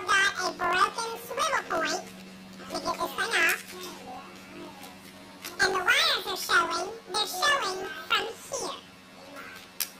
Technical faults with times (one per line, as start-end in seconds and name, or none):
0.00-10.00 planar audio read as interleaved